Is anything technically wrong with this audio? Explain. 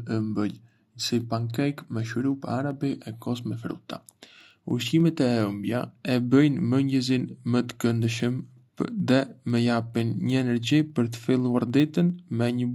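Yes. Periodic USB or driver dropouts run from 0.11 s to 12.6 s, one every 0.1 s. Something blocks the audio path at that fixed interval, and a tiny sliver of audio, around a tenth of a millisecond, is skipped each time. The result is a steady ten-per-second ticking that is audible only while speech is present.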